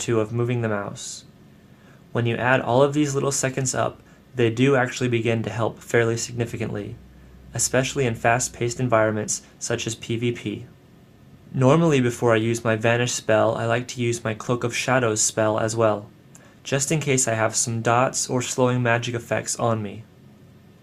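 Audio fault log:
Nothing stood out on listening to this recording.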